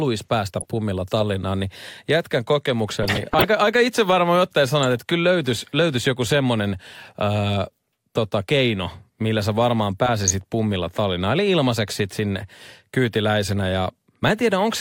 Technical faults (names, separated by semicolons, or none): DAB burbling